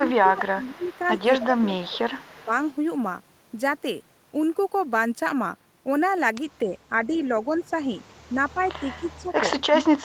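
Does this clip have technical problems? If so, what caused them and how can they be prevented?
Yes. The speech is suppressed in double talk at 0.0–0.92 s, 1.48–2.03 s, 2.45–2.51 s and 6.62 s to the end, dropping by about 10 to 30 dB. The likely cause is an echo canceller turning everything down while both sides spoke. A full-duplex canceller with gentler suppression would prevent it.

Echo leak appears at 0.05–0.4 s and 0.83–2.46 s as a faint delayed copy lagging 249 ms, about 25 to 30 dB down. It likely comes from residual loudspeaker pickup, and the fixed lag distinguishes it from room reverberation. A headset, or better-tuned echo cancellation, would prevent it.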